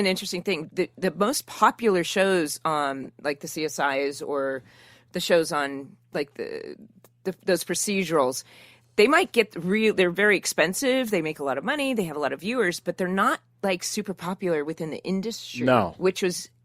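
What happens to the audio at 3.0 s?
At 3.03 to 3.07 s a corrupt frame was decoded: flipped bits in a single compressed frame were played anyway, so misread codes put energy at wrong frequencies. It sounds like a brief chirp, squeak, blip or burst of noise peaking around -25 dBFS.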